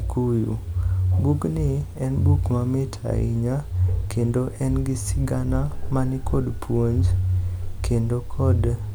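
No technical faults can be heard anywhere in this speech recording. There is no point at which anything in the audio goes wrong.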